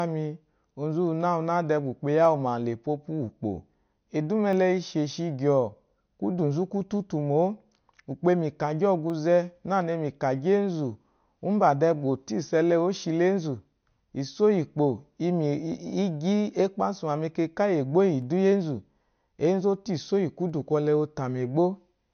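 A speech clip carrying two faults. Throughout, the audio has a hard ceiling at 6.5 kHz and a plainly audible watery, swirling texture, with sibilants turning metallic. That points to MP3 compression, likely at a low rate near 48 kbps, where the encoder has discarded the treble and lets weak frequency lines flicker in and out between frames. A spectrogram would show a flat, empty band above 6.5 kHz and speckled, patchy energy below it. Starting just after "de ba" at 2.25 s, a short click recurs every 2.28 s through 20.50 s, about ten in all. These are likely clock drift buffer slips. Two clocks disagree by roughly 70 ppm, so the buffer between them slowly drifts until a handful of samples, around seven, is dropped or repeated. On the waveform each slip shows as a tiny step discontinuity, and the spectrogram shows evenly spaced thin vertical lines.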